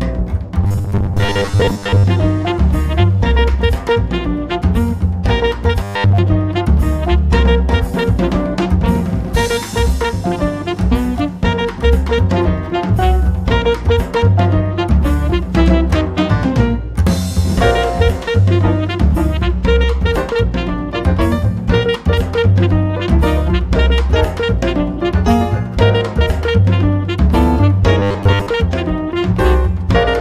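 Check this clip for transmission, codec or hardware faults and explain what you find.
Three bursts of robotic sound from repeated short buffers occur, at 0.64 to 2.06 s, 5.83 to 6.18 s and 28.00 to 28.47 s. The audio turns into a rigid metallic buzz locked at 100 Hz. That fits a 10 ms segment being replayed while fresh audio fails to arrive, likely from buffer starvation. Most of the first and last spans are repeated material. The middle span is almost entirely repeated, so the sound follows the original only roughly there.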